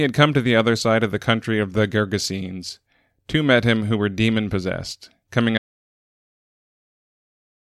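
At 5.58 s, right after "were demon possessed coming", the speech cuts off into an audio dropout to silence. The gap is silent, with no room tone. It runs to the end. The input was likely lost while recording continued.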